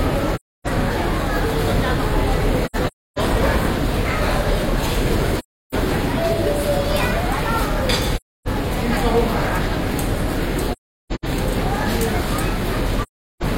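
Everyday sounds, interrupted by AAC frame loss with muting at 0.35–0.67, 2.65–3.19, 5.38–5.75, 8.16–8.48, 10.72–11.25 and 13.03–13.43 s. At each point the decoder had no data for a stretch of frames and zeroed their spectrum. The overlapping transform windows then fade the sound out and back in, leaving soft-edged holes of between 0.3 and 0.47 s of missing audio. At 2.65 and 10.72 s the loss is broken up across about half a second, with the longest gaps roughly 0.3 and 0.4 s.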